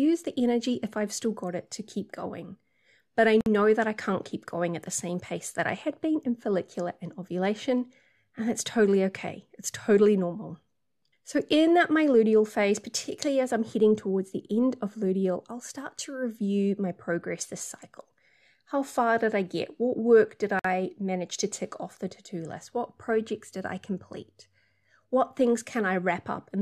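A speech recording with two short silences cut into continuous talk. The first runs from 3.41 to 3.46 s, just before "that I can't keep", and lasts 54 ms. The second runs from 20.59 to 20.64 s, between "work did" and "manage to tick off", and lasts 53 ms. Both have smeared edges. The speech resumes where it stopped. Each is a gap at a join of encoded pieces. The encoder's start-up delay and last-frame padding were left untrimmed.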